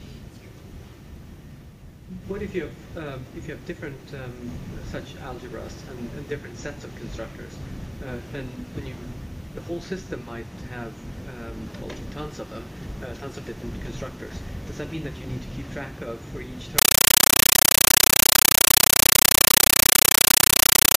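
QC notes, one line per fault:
16.78–20.97 s: compressed stream played as audio. Undecoded AC-3 frames become loud chattering static, seen as 9.33 ms broadband noise blocks 31.25 times a second between near-silent gaps.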